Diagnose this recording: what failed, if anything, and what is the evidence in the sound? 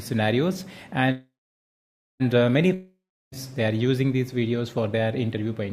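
Network stage, jitter buffer. From 1.11 to 2.22 s the last sound is stretched into a fading buzz that ends in about 0.9 s of silence, then the audio resumes where it stopped with nothing lost, now running about 1.09 s later. This is a call audio freeze, likely caused by delayed packets draining the buffer.

Network stage. From 2.74 to 3.36 s the sound decays into a brief fading hiss, then about 0.35 s of silence. It returns further on, with roughly 0.58 s of audio missing. This is a long network dropout, likely caused by packets that never arrived.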